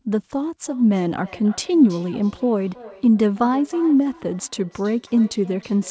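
From 0.67 s to the end of the speech, each phrase returns roughly a third of a second later, at most about 22 dB below the direct sound. This is feedback echo between two devices. A second device in the room replays the call, and the first microphone picks it up again, beyond the reach of its own echo canceller. Room reverberation smears continuously, but here the repeats are discrete, at a fixed interval, and thinner and more ringing, all within the call's 8 kHz band limit.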